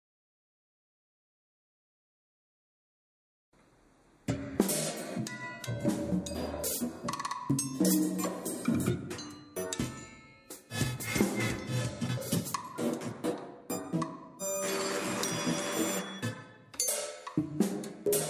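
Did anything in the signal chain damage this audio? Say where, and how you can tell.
No, nothing along the chain left a mark I can hear here, so there's no damaged stage to point to.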